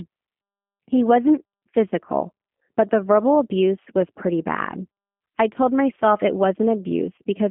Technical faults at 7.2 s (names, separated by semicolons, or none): G.729 codec; VoIP packet loss concealed by the speech codec